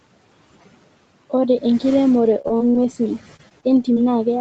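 Speech recorded over a call, with noise suppressor artifacts throughout. The suppressor pulls the room noise down by about 17 dB in the pauses and lets it back up under the speech. From 1.69 s to 3.98 s there is repeated packet loss (robotic sound): a run of short dropouts, the longest 41 ms, each filled by extending the preceding sound. Roughly half a second comes out choppy. The Opus path tops out at 8 kHz.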